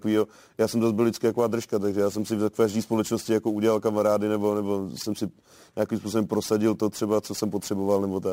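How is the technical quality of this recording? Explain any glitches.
The recording has one clear technical problem, and it runs the whole way through: sample clock jitter. The converter's timing is wobbling, on the order of ten microseconds, so each sample lands a touch early or late. Where the speech waveform is changing fastest, that timing slip turns into a sizeable amplitude error, roughly 25 dB below the signal. You hear it as a gritty hiss riding on the louder and brighter sounds, and it drops away in the pauses.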